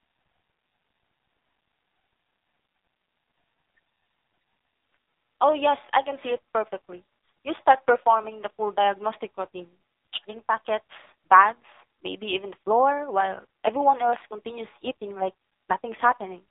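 Throughout, AMR narrowband mobile codec damage: nothing passes above 3.8 kHz, and the buzzy, synthetic voicing, unlike a simple band-limit, points to a low mode near 5.9 kbps.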